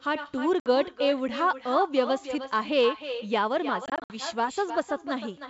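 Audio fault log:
throughout: echo with no canceller; every phrase returns about 10 dB quieter roughly a third of a second later, a thinner copy from an uncancelled far-end loudspeaker.
0.60–0.67 s: packet loss on an ADPCM call; a 60 ms hard-edged silence, about three packets, then speech resumes slightly distorted as the predictor resynchronises.
2.21–2.29 s: wireless microphone noise hit; a brief swish of static over the sound as the FM radio link fades, noise rather than silence, unlike a dropout.
3.86–4.15 s: packet loss on an ADPCM call; 140 ms lost in gaps scattered over 240 ms, longest 60 ms, each hole followed by a brief distorted recovery.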